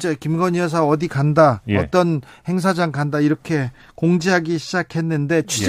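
No technical faults can be heard anywhere in this speech recording.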